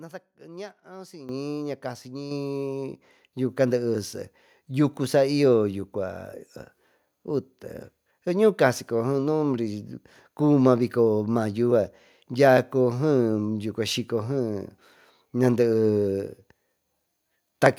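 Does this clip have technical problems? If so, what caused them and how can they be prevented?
Yes: there's a microphone volume stepped up problem at 1.29 s (about 11 dB) and again at 2.31 s (about 5 dB), where the call software bumped the input gain and speech and background jump together. Prevent it by disabling automatic microphone level adjustment.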